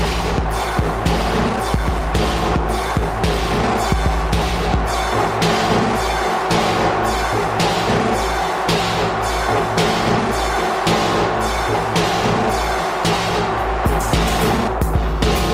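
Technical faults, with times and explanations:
No technical faults audible anywhere in the clip; nothing to log.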